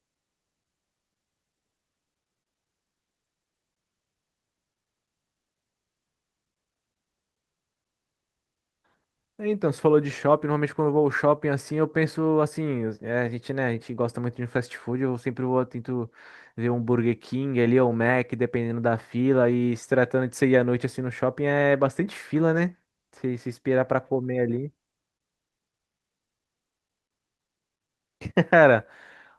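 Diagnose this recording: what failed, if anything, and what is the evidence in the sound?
Nothing stood out on listening to this speech recording.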